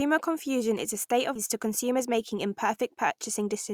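At 1.35 to 1.37 s, a skip ahead: roughly 0.7 s of speech was dropped in transit or discarded by an overflowing jitter buffer while later audio was already queued. Playback lurches forward with no gap, the two sides of the missing stretch butted almost directly together.

From 1.65 to 3.71 s comes a jitter buffer speed-up: holding more audio than its target, the receiver trimmed many short pitch-period pieces, roughly a tenth of a second in all. Speech runs at about 105% speed, pitch unchanged, sounding slightly hurried.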